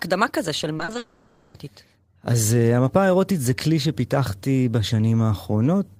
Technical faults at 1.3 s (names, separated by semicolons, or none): long network dropout